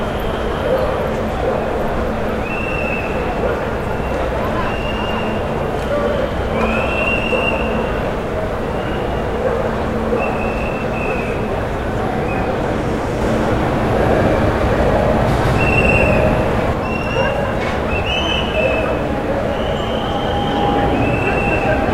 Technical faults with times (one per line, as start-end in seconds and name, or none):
13.21-16.73 doubled audio track